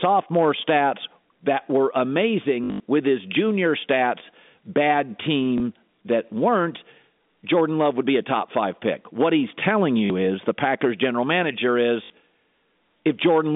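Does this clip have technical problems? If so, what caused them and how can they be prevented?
Yes. The fault is packet loss with last packet repeated. Packets went missing, and the receiver replayed the previous one to fill each gap. Longer runs buzz at about 50 Hz, which fits 20 ms packets. This happens at 2.64–2.80 s, just before "with his junior stats", where about 140 ms was lost in scattered runs of up to 80 ms. It happens again at 5.58–5.60 s, between "his junior stats bad" and "that weren't", at 10.06–10.10 s, after "he's telling", and at 12.04–12.10 s. Better prevention would come from a more reliable network path and proper packet loss concealment or forward error correction in place of simple repetition.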